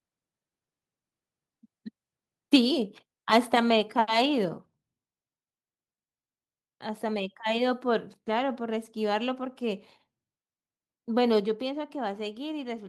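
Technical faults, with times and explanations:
11.4 s, microphone volume stepped down: The speech and the background behind it drop together, all at once, by about 4 dB. There is no fade. The level falls in a single step and stays lower to the end of the clip. Because everything in the room gets quieter at the same instant, the change happened before any voice processing. The likely cause is the call software lowering the microphone's input volume in one move after judging the signal too hot.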